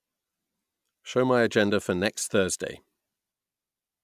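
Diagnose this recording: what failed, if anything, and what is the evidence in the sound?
Listening to the speech in this recording, nothing stood out as a failure at any stage of the chain.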